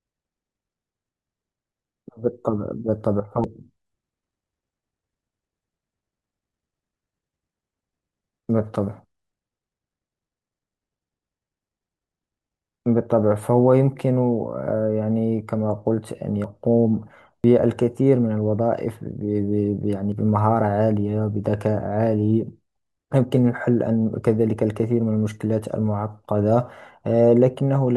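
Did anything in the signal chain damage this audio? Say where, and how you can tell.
Yes. At 3.44, 16.44, 17.44 and 20.12 s the speech skips ahead, losing about 40 ms, or about a tenth of a second at 17.44 s. No silence fills the gap, unlike an underrun, so this is likely a dropped buffer (overrun) in the driver.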